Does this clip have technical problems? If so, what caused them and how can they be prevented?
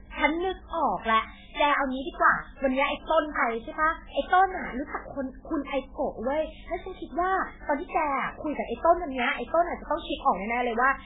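Yes, the whole speech clip has watery, swirly MP3 compression artefacts and nothing above 3.8 kHz, likely from a starved encoder, consistent with about 8 kbps. Encode at a much higher bitrate to avoid it.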